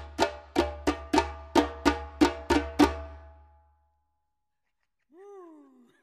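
Nothing in the audio stood out as a technical problem on listening.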